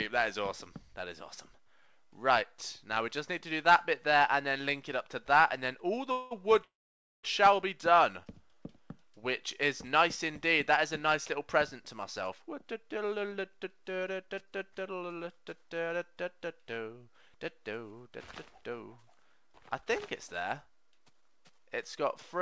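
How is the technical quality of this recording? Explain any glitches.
The recording has a handful of network-style glitches, all clustered as buffer trouble on a call link. The audio has nothing above 8 kHz, which points to a wideband codec like G.722 at 64 kbps.

Call audio freezes at 6.12–6.40 s and 6.64–7.25 s. In the first, the sound stalls for about 190 ms and is bridged by a decaying buzz. The second lasts about 600 ms, and most of it, roughly 530 ms, is plain silence after the fill dies away. This is likely packets held up in transit, leaving the jitter buffer empty. When things resume, the audio picks up where it stopped, so nothing is lost, just delayed.

Jitter buffer slow-down at 7.90–8.56 s. Right after the freezes, the receiver rebuilds its reserve by repeating single pitch periods and bits of pauses, stretching the passage by about 41 ms. Playback drops to about 95% speed with the pitch unchanged, so sounds come out slightly drawn out, maybe with a faint warble.

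Jitter buffer speed-up at 12.35–15.17 s and 19.03–22.05 s. Both times the buffer is holding more than it wants, so it trims short pitch-period chunks, roughly a third of a second in each stretch. The audio runs at about 110% speed with the pitch intact, giving it a noticeably hurried feel.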